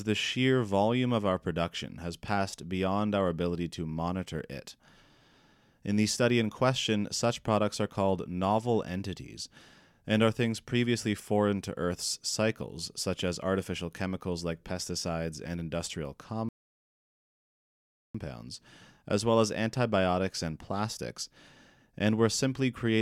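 At 16.49 s, right after "like pesticides and industrial", a rebuffering stall halts the speech in silence until 18.15 s, adding 1.66 s while the player waits for data. Unlike a dropout, nothing is skipped: speech resumes exactly where it stopped.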